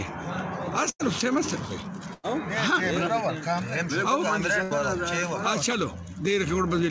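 At 0.90 to 1.01 s, 2.13 to 2.25 s and 4.63 to 4.73 s, bursts of packet loss leave gaps of roughly 80 to 100 ms. Rather than dropping to silence, each gap is filled with a fading continuation of the preceding sound, and the audio then jumps ahead past the missing stretch.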